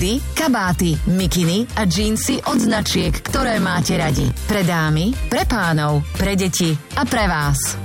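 The audio has a block size mismatch (padded) from 2.26 s to 4.31 s. Each block is only partly filled and the remainder zeroed, giving a 43.1 Hz buzz, which fits a 1024-sample read block. Playback runs at 0.938 times normal speed with timbre essentially unchanged.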